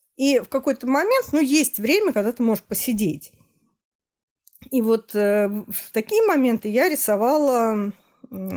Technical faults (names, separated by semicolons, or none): none